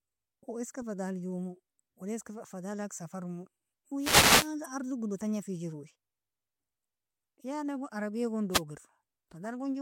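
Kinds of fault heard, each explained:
Corrupt frame decoded: Damaged bits in compressed speech frames were decoded anyway, misplacing energy. There is a brief blip at 0.49–0.51 s, spanning about two frames, just before "iska fadala", and a single-frame one at 9.44 s. Each peaks near -35 and -40 dBFS and shows as a short, sharp-edged smear of misplaced energy on a spectrogram.
Wireless microphone noise hit: An FM radio microphone's signal faded, letting receiver noise rise over the speech. There are static swishes at 3.98–4.52 s and at 8.51–8.62 s, right after "gon arbia gon". On a spectrogram each appears as a broadband noise band, and on the waveform as a fuzzy, raised noise floor.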